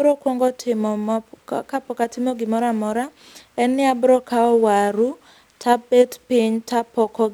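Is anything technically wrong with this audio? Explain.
No, there's nothing technically wrong with this speech recording that I can hear.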